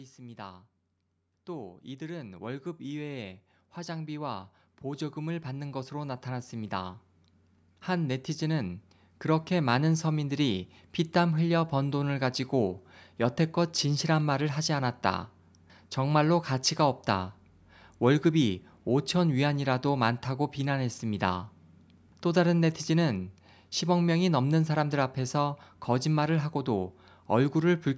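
A speech recording in which the level swells steadily from 0.15 s to 9.98 s, voice and background noise rising together by about 17 dB. That is automatic gain rising: the call's gain control judged the input too quiet and pushed its gain up gradually, with the microphone processing leaving nothing above 8 kHz.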